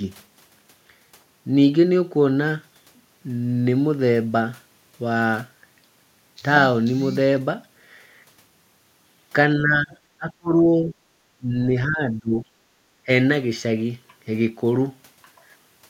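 Speech, with the talker's level repeatedly pulled down between 9.6 and 12.45 s, at 9.6–9.94, 10.18–10.95, 11.38–11.7 and 11.87–12.45 s, dipping by around 15 to 30 dB. This is likely speech suppressed in double talk, with the echo canceller turning down the near talker while the far side spoke. On a waveform the envelope pinches in, and a spectrogram shows the harmonics thinning out. Just afterwards, at 12.73 s, the background is gated by the echo canceller for about 50 ms, with the room tone dropping about 10 dB. This shows as a brief notch in the noise floor across the spectrogram and a short dip in the waveform.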